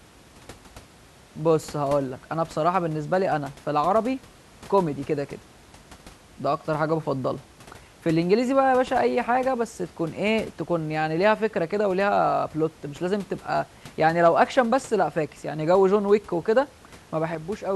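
No technical faults can be heard in this recording.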